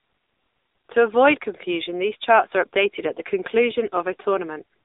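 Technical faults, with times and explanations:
Throughout: AMR narrowband mobile codec. The speech is confined to a telephone band of roughly 300 Hz to 3.7 kHz, with nothing above 3.8 kHz, and it carries a plainly audible buzzy, synthetic texture, which fits a low mobile rate near 8 kbps. A plain band-limiting filter would only muffle the sound. Here the voice is rebuilt from a vocal-tract model driven by sparse pulses in short frames, which coarsens its character as well as its bandwidth.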